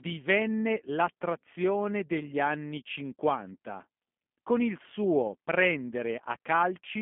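Speech squeezed through G.729 the whole way: a 200 Hz to 3.5 kHz telephone band, with that rough, synthetic, pulse-built texture plainly audible, consistent with an 8 kbit/s G.729A encode.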